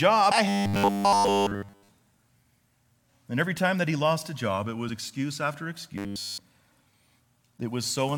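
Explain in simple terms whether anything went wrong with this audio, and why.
A small piece of the compressed audio data was damaged. It was lost, blanked out or overwritten. At about 0.30 s the decoder hit those bad bytes, could not read them properly, and had to hunt for the next clean starting point to resume. This fault is called damaged data in a compressed stream. It lasts only a split second and comes through as a brief chirp or blip that interrupts the speech.

Twice more, from 0.49 to 1.89 s and again from 5.98 to 6.38 s, the speech turns into a stiff, metallic buzz pitched at 100 Hz, a steady hum-like tone. This is robotic sound from repeated short buffers. Its likely cause is fresh audio reaching the playback software too slowly, so the software kept replaying the last tiny slice, about 10 ms long, while nearly all of the real audio in those stretches was skipped. The speech still rises and falls roughly but sounds machine-like.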